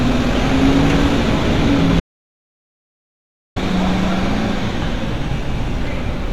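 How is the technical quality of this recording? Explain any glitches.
The recording has one clear glitch: an audio dropout to silence from 2.00 to 3.56 s. For about 1.56 s the sound cuts off abruptly to dead digital silence and then returns mid-flow, most likely because the input signal was briefly lost while recording continued. Unlike a quiet passage or a noise gate closing, the gap has no room tone or fade at either edge, and whatever sounded during it is missing.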